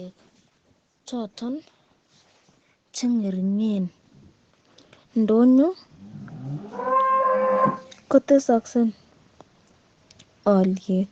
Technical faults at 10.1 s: none

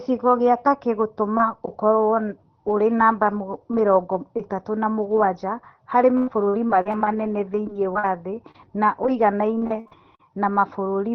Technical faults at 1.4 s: none

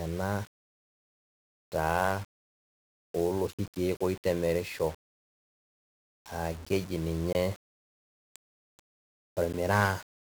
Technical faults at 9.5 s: 1-bit DFPWM compression; block of digital silence

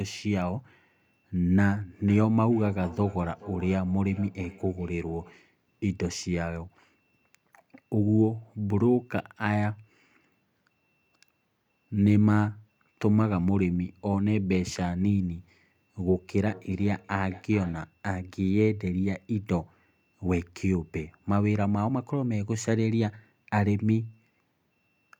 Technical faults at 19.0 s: none

